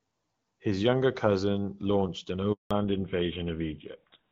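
A speech recording carries two faults that arrive together near the end. The first is a handover gap. Just after "younger cousin launched an", at 2.53 s, the voice fades out within a few tens of milliseconds. Silence follows for 180 ms, until 2.71 s. The call was being passed from one network to another. No speech frames got through during the switch, so whatever was said in that span is gone. The second fault is a fallback to narrowband, starting at 2.71 s and lasting to the end. Up to that point the audio has the fuller, brighter sound of HD Voice, with only light coding roughness, consistent with AMR-WB at a mid rate. After the switch nothing above 4 kHz remains. The voice turns duller and rougher. The sudden loss of top end points to the new link using an older narrowband codec, consistent with GSM full rate.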